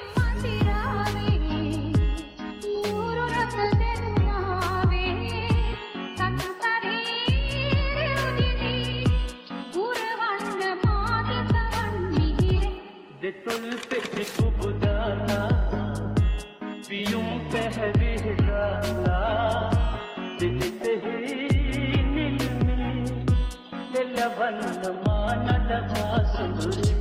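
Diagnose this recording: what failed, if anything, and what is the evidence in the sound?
No fault detected anywhere.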